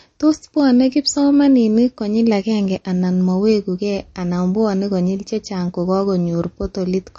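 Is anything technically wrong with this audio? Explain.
Yes. From start to finish the speech sounds watery and swirly, with a metallic, chirping edge on s sounds and consonant onsets that smear instead of landing crisply. Nothing is audible above 8.3 kHz, so the top end is dull. The likely cause is MP3 compression at a low bitrate, around 35 kbps. Short of bits, the encoder cuts the treble at a fixed point and drops quieter frequency lines that flicker in and out between frames.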